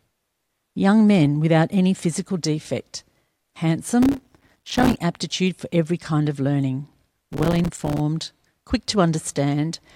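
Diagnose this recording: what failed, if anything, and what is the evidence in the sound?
Processor overload crackle at the driver and buffer stage, 4.03 to 4.99 s and 7.33 to 8.00 s. The speech tears into grit as many buffer deadlines of a few milliseconds are missed, each leaving a hard-edged silent gap. The waveform shows dense dropouts, and the spectrogram shows broadband vertical streaks.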